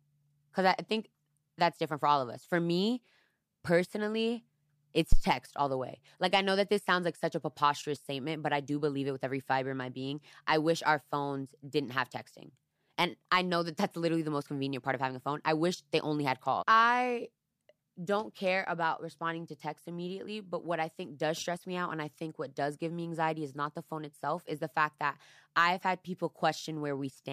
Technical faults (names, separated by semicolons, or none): phantom power thump